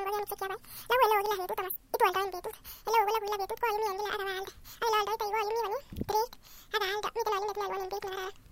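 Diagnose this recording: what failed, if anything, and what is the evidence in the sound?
The speech runs at twice its natural speed and sits a full octave high, 12 semitones up, from start to finish. That's a wrong sample rate fault at playback: samples that fit a capture at roughly 22 kHz are being clocked out at 44.1 kHz with no resampling, so time and pitch scale together by the same factor of two. There are no dropouts or tonal artefacts, just everything uniformly sped up and chipmunked.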